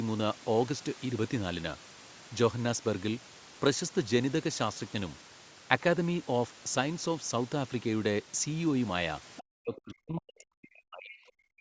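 From 9.37 to 9.42 s, a brief scrap of another voice can be heard under the talker, around 20 dB below the main speech. This is the other side's voice leaking through, most likely loudspeaker playback reaching the microphone that the echo canceller did not fully remove.

Starting at 9.41 s and running to the end of the clip at about 11.6 s, the talker's speech sinks, dropping by as much as roughly 40 dB in places over some two seconds in total. This is speech suppressed in double talk: with both sides speaking at once, the canceller likely could not separate the talker from the echo and attenuated both. The call band reaches up to 8 kHz.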